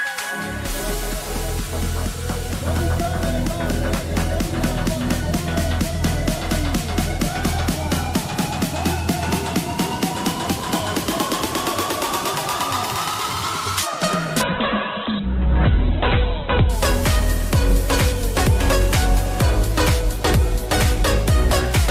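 From 14.44 to 16.81 s, a call bitrate drop. Starved of bits, the encoder codes coarsely. Sound turns rough and muffled, with nothing above 4 kHz.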